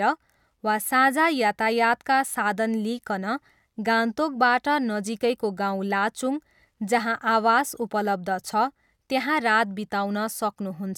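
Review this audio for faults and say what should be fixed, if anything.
Nothing here needs fixing: the speech comes through without any faults to flag, so there's nothing to correct or guard against.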